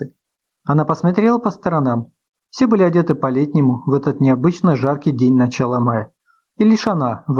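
Gain pumping runs through the whole clip: the gain swings by around 10 dB, ducking under every loud sound, leaving levels squashed together. The likely cause is input gain set far too high, with a fast limiter repeatedly clamping it. The call codec's coding noise sits underneath, with the top end ending near 12 kHz.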